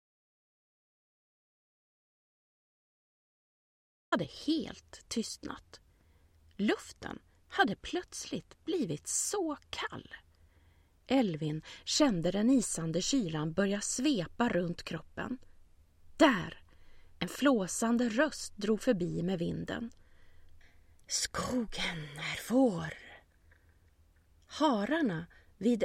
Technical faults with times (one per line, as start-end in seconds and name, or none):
0.00-4.12 audio dropout to silence